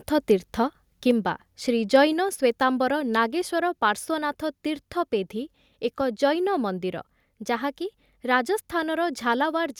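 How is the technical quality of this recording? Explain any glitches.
The speech has three level faults packed into its first couple of seconds. At 1.11 s and again at 2.13 s, voice and background suddenly drop by about 3 dB and about 2 dB. This is microphone volume stepped down, likely the call software lowering the device's input gain. From 1.94 to 2.02 s, the loudest peaks turn harsh and crackly, about 1 dB over the limit with a small fraction of samples flattened. This is microphone overload, likely caused by input volume set too high for the converter, which also explains the second step-down just after it.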